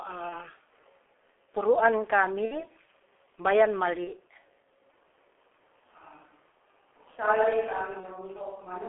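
The whole speech clip has gone through the G.723.1 codec at about 6.3 kbit/s, with heavy damage. Everything sits in a narrow telephone band of roughly 300 Hz to 3.4 kHz, so it sounds boxy and muffled. Because the coder updates its model of the voice only every 30 ms or so, consonants smear together and vowels take on a rough, hoarse edge.

The first dropout is VoIP packet loss concealed by the speech codec, at 0.29 to 0.49 s. About 30 ms of audio went missing, which fits one lost frame. The decoder filled the gap by repeating its last pitch and filter shape, so you hear a short buzzy smear that fades. The sound stays thin for a while after the packets resume, because each frame is built on the previous one. The same thing happens at 2.45 to 2.70 s, where the gap is around 60 ms, which points to two frames, so the buzz and the recovery last longer. A shorter one follows at 4.05 to 4.11 s.

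From 4.90 s to the end there's a switch to a distant microphone. The sound suddenly turns roomy and hollow and loses bass, drops a few dB in level, and picks up a faint room noise well below the voice. It most likely comes from the close mic's signal dropping out. One more concealed loss hits at 8.00 to 8.07 s, inside that distant section.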